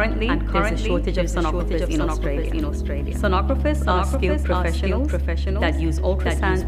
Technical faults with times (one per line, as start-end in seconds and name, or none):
0.00-6.68 doubled audio track